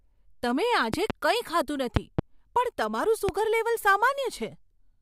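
At 0.94 to 1.12 s there's a loud pop, actually a pair in quick succession, jumping roughly 15 dB above the speech. Another double pop hits at 1.96 to 2.21 s, closer to 20 dB over, then a single one at 3.29 to 3.31 s, about 15 dB up. Each is likely a sudden voltage step from a switch, connector or static discharge, shaped into a sharp thump while the speech keeps going underneath.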